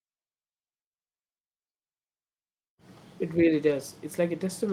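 Speech with a lost packet rebuilt from error correction at 3.67–3.73 s: about 40 ms, consistent with two packets, sounds rough and noisy, with no gap in the waveform.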